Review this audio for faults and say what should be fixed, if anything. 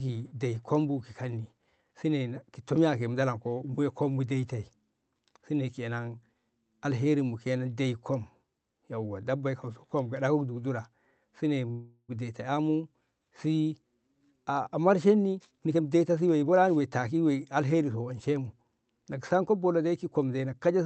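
Call audio freeze, 11.71 to 12.11 s: the speech stops advancing and the last sound is stretched into a buzzy tail that fades and ends in about 60 ms of silence before the talker picks up exactly where they left off. About 371 ms of filler was inserted with nothing lost, so everything after is that much later. The likely cause is packets held up in transit, draining the jitter buffer until they arrived. Prevent it by fixing the network path's delay spikes or giving the jitter buffer more headroom before playout.

Jitter buffer speed-up, 15.30 to 16.81 s: the speech runs at about 124% of normal speed while keeping its pitch, so it sounds rushed. The receiver was holding more audio than its target, as happens when late packets land together. It cut out many short pitch-period-sized slices in succession, trimming roughly 0.4 s to bring latency back down. Preventing the preceding packet bunching, or letting the buffer shrink more gradually, would avoid the hurried stretch. 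The Opus call path's 8 kHz bandwidth limit is a setting of that path and isn't itself a fault here.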